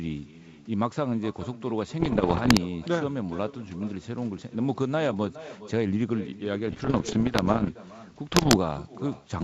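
Because nothing at the far end cancels the echo, the loudspeaker's output leaks back into that side's microphone and returns across the network. The result is echo with no canceller throughout the speech. Every phrase is trailed by a quieter, thinner copy arriving roughly 0.4 s later and sitting about 15 dB below the direct sound. That is late enough to be heard as a distinct repeat rather than as room colour.

Flipped bits on the wideband link, which otherwise has the clean, bright sound of G.722, produce bit errors on an ADPCM link in three bursts: 2.00 to 2.59 s, 6.68 to 7.70 s, and 8.32 to 8.58 s. The error rate is around a couple of percent in each. Each corrupted bit also throws off the decoder's step size and prediction, so the damage lingers for a few milliseconds. It comes through as clusters of pops and rough, gritty bursts with brief jumps in level, and the longest stretch is the middle one.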